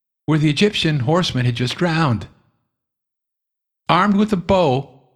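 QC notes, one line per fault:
Nothing to flag on this speech clip, so there's no fault line to log here.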